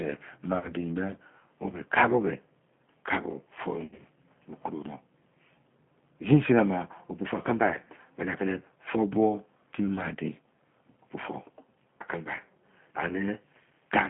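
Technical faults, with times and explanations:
Throughout: G.729 codec at 8 kbit/s, with speech rebuilt from a vocal tract filter, pitch predictor and sparse pulses. The line band runs roughly 150 Hz to 3.4 kHz, so the top is cut off, and the coding damage is plainly audible as a rough, synthetic edge on the voice.
0.58–0.73 s and 3.84–4.01 s: VoIP packet loss concealed by the speech codec. About 60 ms of audio was lost across a 100 ms stretch, then 100 ms across 140 ms with a run up to 50 ms. The decoder extended its last pitch and filter at falling gain, so the speech smears into a fading buzz or coloured noise and stays weakened briefly after packets resume.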